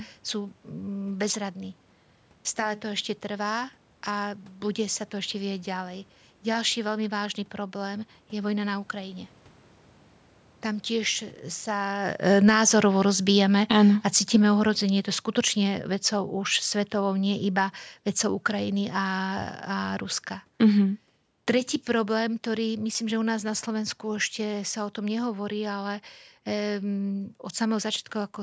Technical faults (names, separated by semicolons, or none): automatic gain falling